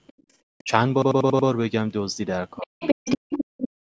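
A speech recording from a speakerphone call, with the microphone path band-limited to nothing above 8 kHz. The other side's voice leaking through appears as faint scraps, far below the talker, at 0.07–0.13 s and 0.58–0.64 s. From 2.56 to 3.69 s it is as loud as the talker. This is likely residual loudspeaker echo that the canceller failed to subtract. Background gated by the echo canceller cuts the room sound sharply, by about 31 dB at 0.13–0.28 s and about 39 dB at 3.45–3.57 s, as the canceller clamps the microphone while the loudspeaker plays. The talker's speech is suppressed in double talk at 0.63–0.70 s, 2.62–3.09 s and 3.89–3.99 s, dipping by roughly 30 to 40 dB. This is likely the canceller attenuating both voices when it cannot separate near speech from echo.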